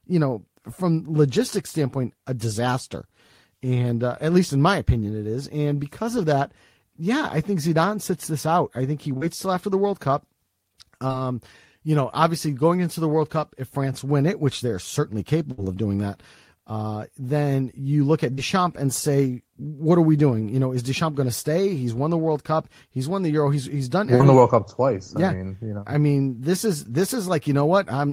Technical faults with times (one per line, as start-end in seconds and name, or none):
9.17-9.23 short concealed packet loss
11.07-11.12 short concealed packet loss
15.52-15.60 burst of packet loss
18.34-18.39 short concealed packet loss
24.15-24.21 short concealed packet loss